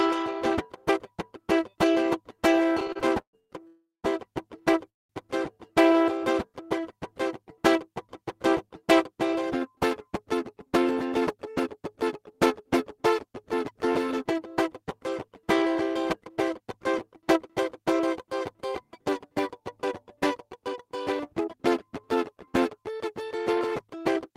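Repeated stalls (stutter) run from 2.75 to 3.51 s in this music clip: the playback halts seven times, with the longest gap 118 ms, and about 300 ms of filler covers roughly 40% of that stretch. Packets were arriving late or more slowly than they were played, so the jitter buffer kept running dry and the receiver stretched the last sound each time, leaving the music dragging and stuttering while nothing is actually lost. Call audio freezes follow at 3.67 to 4.06 s and 4.90 to 5.11 s, likely from packets held up in transit emptying the buffer. The first freeze fills 363 ms, the last 170 ms of it silent. The second fills 198 ms, almost all of it (190 ms) silence. The receiver extends the final sound as a fading tail before the music resumes exactly where it stopped, adding those gaps to the overall delay. Jitter buffer speed-up appears at 10.53 to 12.31 s (110% speed), 15.75 to 18.24 s (105%), 18.64 to 21.57 s (108%) and 23.53 to 24.31 s (108%). 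The buffer held more than its target, so the receiver trimmed short pitch-period pieces over and over, about 0.2 s in the first and third runs, 0.15 s in the second and 0.07 s in the last. Pitch stays the same, but the tempo hurries and loses its steadiness.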